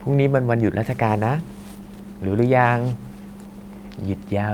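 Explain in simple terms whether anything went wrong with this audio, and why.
Nothing went wrong with this audio, because no technical fault can be heard anywhere in the recording.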